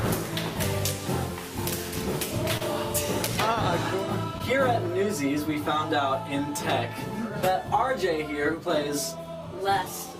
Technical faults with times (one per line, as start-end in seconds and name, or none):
2.57-2.62 short concealed packet loss
4.38-4.41 short concealed packet loss